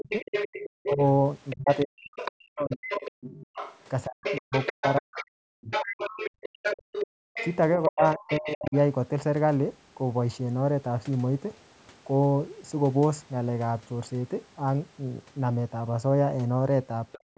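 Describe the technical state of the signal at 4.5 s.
At 4.5 s the talker is being chopped and ducked in pieces, sometimes almost to silence, across 0 to 6.09 s: speech suppressed in double talk. The likely cause is an echo canceller turning everything down while both sides talk. Unlike packet loss, the cuts follow the other voice. Over the same moment, the other side's voice is leaking through, running from 0.09 to 8.76 s and nearly as loud as the talker. It is likely loudspeaker echo the canceller left in, and it is a second voice, not the talker's own reverberation.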